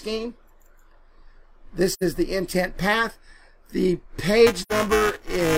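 At 1.91 s the sound fades out and back in, leaving a soft-edged hole that runs to about 2.03 s. This is AAC frame loss with muting. The missing stretch of roughly 85 ms points to about two lost AAC frames whose spectrum the decoder zeroed. The overlapping transform windows taper the sound into and out of the gap, so the edges are smooth. That smoothness is what separates it from a hard dropout.

From 4.46 s to the end of the clip, buffer tearing adds a steady robotic buzz at 375 Hz. That rate fits a 128-sample buffer. The writing side and the reading side of the ring buffer have drifted until they cross within each period. About a tenth of every buffer then replays audio from a few milliseconds earlier, with hard joins on both sides. Unlike a single glitch, the rattle is periodic and continues for as long as there is signal.

At 4.62 s, inside that torn stretch, a second AAC frame loss with muting fades the sound out until about 4.72 s. 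Again about 85 ms is missing, which fits two frames, and the gap has the same soft edges.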